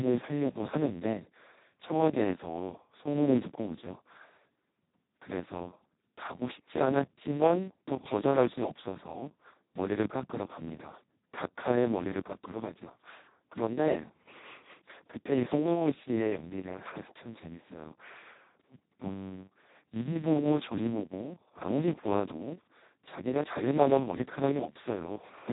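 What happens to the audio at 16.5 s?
At 16.5 s, as throughout, the Speex codec is starved of excitation bits, fitting roughly 2 kbps, so speech sounds hoarse, robotic and empty above 3.8 kHz.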